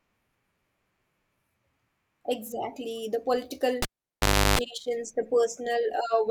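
At 3.82 s the speech is cut by a sharp pop. It's a cable pulled and plugged in while live. The signal drops to near silence for about 0.71 s. During that gap a 50 Hz mains buzz bursts in for about 0.34 s as only the plug tip makes contact. A second pop at 4.59 s brings the sound back. On a waveform this shows as two spikes around a flat gap. A spectrogram shows the buzz as stacked horizontal lines at 50 Hz and its harmonics.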